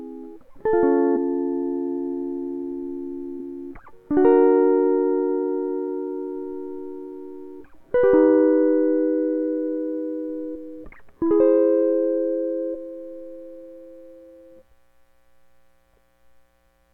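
At 1.15 to 1.17 s the music is hit by damaged data in a compressed stream. Part of the encoded stream is corrupt. The decoder misreads those bytes, loses frame sync and hunts for the next valid header. The result is a brief glitch.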